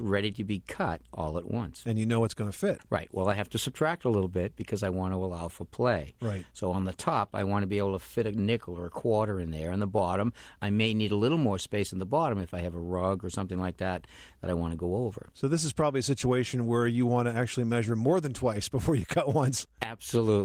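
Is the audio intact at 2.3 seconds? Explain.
Yes, the speech at 2.3 seconds is intact, with no dropout, click or other fault at that moment.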